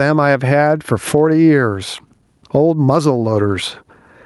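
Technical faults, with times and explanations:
Throughout, gain pumping: the level keeps getting pulled down under each loud bit of speech, swinging by around 20 dB. It's likely a limiter or compressor clamping down on input gain set way too high, which leaves everything squashed.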